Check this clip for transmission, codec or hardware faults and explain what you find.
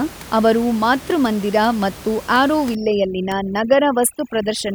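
Overdone noise removal affects the speech from 2.75 s to 4.75 s. A noise reduction stage set far too aggressively cuts any frequency band that sits close to its noise estimate, so the room noise, about 18 dB below the speech, drops and breaks up into twinkling specks. The quieter parts of the voice are cut along with it.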